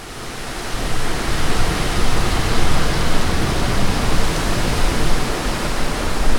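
No technical fault can be heard in the audio. There is nothing here that needs a time or a cause.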